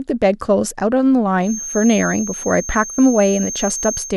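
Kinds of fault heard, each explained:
Feedback whistle: From 1.38 s to the end of the speech, a thin, steady tone at 6.4 kHz sits behind the sound, about 10 dB below it and swelling and fading slowly in level. The likely cause is a loudspeaker-to-microphone loop held just at the edge of feedback, so this one frequency keeps ringing without building up. On a spectrogram it shows as a single unbroken horizontal line at 6.4 kHz; the waveform barely reveals it.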